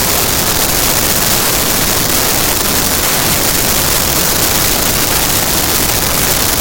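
From start to finish the audio has a wrong sample width fault. Data written as 32-bit integers are being read as 16-bit integers, so each original sample is split into two values. One half carries the top bits of the real signal, while the other half comes from the low-order bytes and produces loud noise. The original sound sits buried under that noise and plays back at 0.5 times speed, an octave low.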